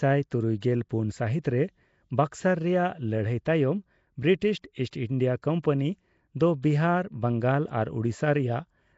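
Throughout the recording, the speech appears to have passed through a low-rate block codec, most likely Nellymoser compression. Such a coder works on short fixed blocks, spends very few bits on each sample and fills weak bands with substituted noise. Nothing survives above about 7.7 kHz, and the damage is plainly audible: the voice carries a rough, hissy halo and a smeared, underwater colour. This degree of damage fits a rate of around 32 kbps.

At 4.91 s and again at 6.62 s there is pre-echo. In each case a sharp attack falls late inside a coding block, so the noise sized for that loud onset is also spread into the quiet moment just before it. The first smear lasts about 18 ms and the second about 13 ms. Each attack is preceded by a brief hiss, which leaves its leading edge sounding softened rather than crisp.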